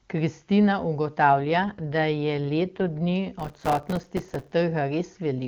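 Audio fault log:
1.24 to 3.13 s, AMR rate drop: The speech turns rough and synthetic, with no gap and no loss of band. The wideband codec is clean before and after. The roughness fits the rate falling from 23.85 to 8.85 kbit/s, with the spare bits spent on error protection.
3.40 to 4.52 s, processor overload crackle: A gritty crackle tears through the speech, then stops. Deadlines were missed over and over. Each miss drops in a hard-edged sliver of silence. The texture fits buffers of about 3 ms, with about 100 of them missed.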